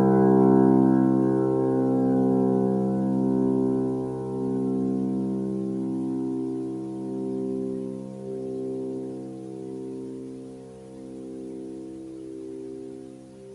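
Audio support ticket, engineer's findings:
No technical fault found anywhere in the clip of sounds. No component flagged and no action needed.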